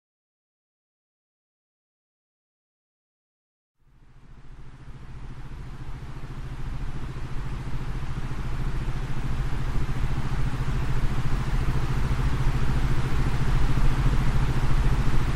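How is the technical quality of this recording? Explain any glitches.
No glitches or technical faults can be heard anywhere.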